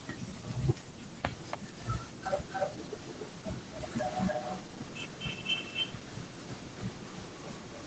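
Speech here, with an echo leak trailing the voice by about 285 ms. A faint scrap of it pops up at 0.35 to 0.4 s, well under the talker. Then from 1.3 s to the end it's back and nearly as loud as the speech itself, so everything doubles. The likely cause is a loudspeaker on the far end whose echo canceller let its mic pickup through and sent it back down the call.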